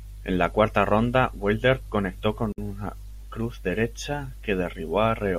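A gap at a join of encoded pieces opens at 2.52 s and lasts about 57 ms, to 2.58 s. Separately encoded segments were butted together untrimmed, so encoder start delay and last-frame padding leave a silent hole in the speech, with smeared edges before it resumes.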